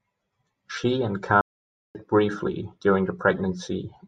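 At 1.41 s the player most likely ran short of incoming data, or its output thread was held up, so it had nothing to send to the output and fell silent. This playback stall cuts the speech off mid-flow for about 0.54 s, a clearly audible hole rather than a click or dropout. Audio returns at 1.95 s with "briefly during", picking up after the gap instead of being smoothed over.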